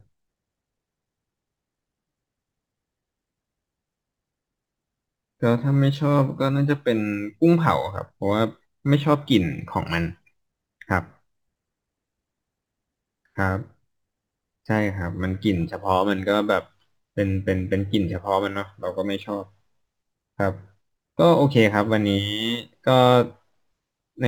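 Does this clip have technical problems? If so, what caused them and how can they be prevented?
Yes. Crude rate conversion runs throughout: samples are repeated without filtering, consistent with 44.1 kHz to 48 kHz, adding gritty inharmonic fizz about 30 dB below the speech. Use a properly filtered resampler.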